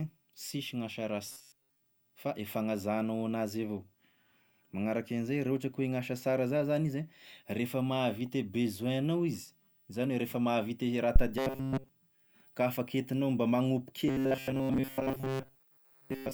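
At 1.27 to 1.80 s, 11.38 to 11.89 s and 14.08 s to the end, robotic sound from repeated short buffers turns the speech into a metallic 133 Hz buzz. It is likely caused by audio arriving too slowly, so that most of it is replaced by loops of about 7.5 ms (all of it in the middle stretch). On a spectrogram this shows as rigid evenly spaced harmonics. Between 11.16 and 11.25 s, a phantom power thump from a supply switched on or off on the live input gives a deep low-frequency jolt. It decays over about 21 ms and appears as a sharp waveform step.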